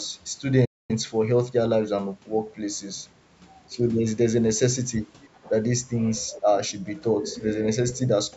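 At 0.65 s the speech cuts to silence for about 240 ms, until 0.91 s. This is a playback stall. The player likely ran short of data or was blocked. The output went dead, then resumed.

At 3.68 s the speech dips sharply for about 50 ms, falling by roughly 15 dB. This is speech suppressed in double talk. Both sides likely spoke at once, and the echo canceller turned the talker down along with the echo.

From 5.34 to 5.50 s a faint second voice comes through, about 25 dB below the talker. This is the other side's voice leaking through. The far end likely played on a loudspeaker, and the echo canceller missed part of it.

Overlapping that, from 5.43 to 5.51 s, the speech drops again by about 10 dB. A milder dip of about 5 dB follows from 6.31 to 6.49 s. Both are the same double-talk suppression.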